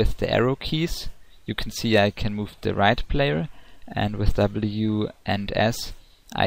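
The signal shows no audible technical faults at any point in the recording.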